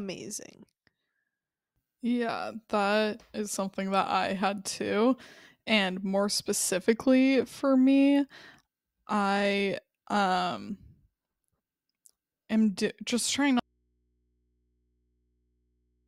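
At 13.6 s, after "am just trying", an audio dropout to a faint residue, likely a lost input feed, leaves only hum about 45 dB down to the end: a flattened waveform and faint low spectrogram lines.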